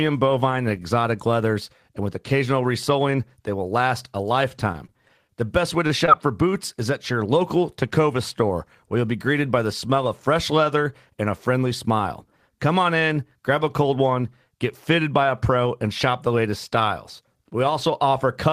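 From 4.57 to 5.32 s, just after "they will last a", repeated packet loss struck: five holes in quick succession, the longest 23 ms, were patched by extending the preceding sound. About 74 ms was synthesised and 60 ms of real audio lost, so the passage turns choppy, with pieces missing.

At 5.87 to 5.92 s, after "best way", a short stall from a late packet emptied the jitter buffer. The receiver stretched the last sound by 26 ms until the packet arrived. Nothing is lost, but a sound hangs on slightly too long.

At 6.06 to 6.09 s, right before "for boots is at", a short concealed packet loss dropped about 20 ms that never reached the decoder in time. A 17 ms fill continued the prior sound, leaving a brief smear or wobble as playback rejoined the real audio.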